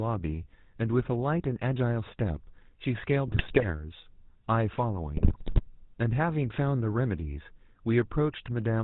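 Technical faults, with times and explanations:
Throughout: GSM full-rate codec. The audio has passed through the original GSM full-rate speech coder, running at 13 kbps. It models the vocal tract as a filter and excites it with a sparse, regularly spaced pulse train that keeps only a third of the excitation samples, discarding everything above 4 kHz. The result is a plainly audible buzzy, gravelly roughness on the speech and a dull, band-limited top end.
3.28–3.66 s and 5.17–5.61 s: GSM bit errors. During these two bursts the decoder received corrupted frames, consistent with a few percent of bits flipped on a weak link and roughly 18 and 21 damaged 20 ms frames. Wrong filter, pitch and gain parameters bend the spectrum and make the level jump from frame to frame, so the speech breaks up into squawks, pops and a gargling texture.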